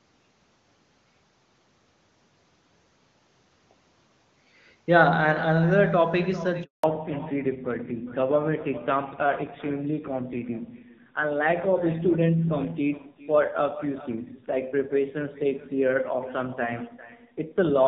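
Echo with no canceller runs throughout: the far end's loudspeaker feeds its microphone, so every phrase returns about 18 dB quieter, roughly four-tenths of a second later, and thinner. At 6.64 s a handover gap drops all speech frames while the call switches networks, leaving 200 ms of silence. From 6.84 s to the end, a fallback to narrowband replaces the clean HD Voice link with an older narrowband codec at a low rate, so nothing above 4 kHz survives and the speech turns dull and rough.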